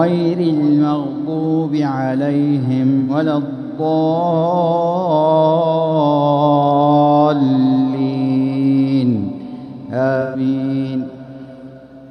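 AAC frame loss with concealment at 3.00–3.10 s and 10.20–10.40 s: the decoder rebuilt missing audio from the last good spectrum, leaving brief smeared, phasey patches. The gaps of about 85 ms and 128 ms fit two and three lost frames.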